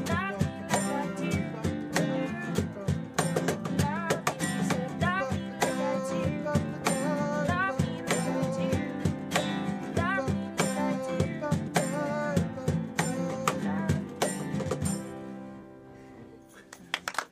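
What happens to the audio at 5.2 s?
At 5.20 s the audio jumps forward, most likely because of a dropped buffer (overrun): the software failed to read its samples before the hardware overwrote them, so roughly 20 ms of sound is missing and the sections on either side are joined directly. No silence fills the gap. On a waveform this appears as an abrupt break in the shape at the joint, and on a spectrogram the content shifts suddenly without any gap.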